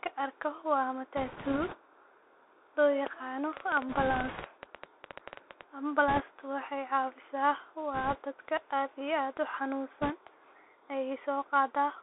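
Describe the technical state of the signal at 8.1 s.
Bit errors on a Bluetooth voice link run from 7.94 to 8.18 s, ending just before "dadka aad iyo". Flipped bits in the one-bit up/down stream each nudge the waveform by an amount that grows with the speech level and then fade, so instead of sharp clicks there is a rushing, crackly noise, consistent with an error rate of around 2 percent.

Beneath this sits the Bluetooth CVSD headset codec, present throughout. Band-limited to roughly 300 Hz to 3.7 kHz, it carries a granular hiss, scratchy sibilants and slope-overload grit on loud high-frequency sounds, which fits a 64 kbps CVSD headset stream.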